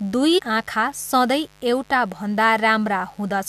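Mains buzz runs through the whole speech clip: a steady, raspy 50 Hz buzz sitting about 35 dB below the voice. Sharp switching spikes from a dimmer, rectifier or unshielded lead, twice per mains cycle, spread harmonics up into the kilohertz range. Damaged data in a compressed stream appears from 0.37 to 0.40 s as a brief chirp or blip. Corrupted bytes made the decoder misread frames there, lose sync and hunt for the next valid frame header before picking up again.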